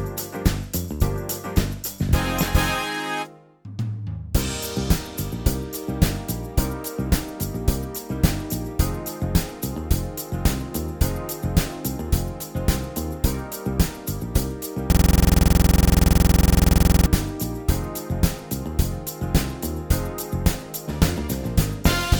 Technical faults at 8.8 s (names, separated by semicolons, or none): none